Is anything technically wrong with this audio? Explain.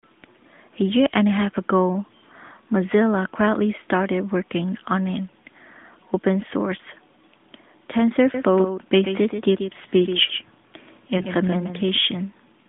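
Yes, there are two faults. From 8.34 to 11.96 s the speech has a faint, flat echo trailing it by about 150 ms, about 10 dB quieter, with no room colour, and it starts and stops abruptly. This is a doubled audio track, likely from the same signal being captured a second time along a slower path.

From 11.18 to 11.24 s, inside the doubled stretch, there is a brief dip and warble in the speech. These are lost AMR speech frames: a single 20 ms frame failed its checks, so the decoder filled the gap by repeating its last good settings at falling gain. The surrounding line sounds like AMR narrowband, limited to roughly 200 Hz to 3.6 kHz.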